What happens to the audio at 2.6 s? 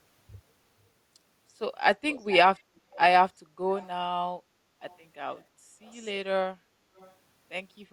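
From 2.56 to 2.62 s there is a brief echo leak. A very faint copy of the speech returns about 0.34 s late, far below the main voice. It is likely a far-end loudspeaker echo that the echo canceller failed to fully remove.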